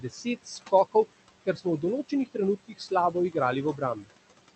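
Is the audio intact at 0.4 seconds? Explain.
No. At 0.4 s the speech is cut by the noise suppressor. This runs from the start of the clip to 0.73 s, and about 0.4 s of sound within that span is affected. The suppressor mistakes part of the speech for background noise. It turns those parts down along with the noise, by up to about 14 dB at the deepest point. The affected speech sounds swallowed and faint.

Noise suppressor artifacts are also present at this moment, as they are through the whole clip. The suppressor estimates steady noise in each frequency band, frame by frame, and pulls it down by about 19 dB. Against the room noise, the background drops away in gaps and comes back up under the speech.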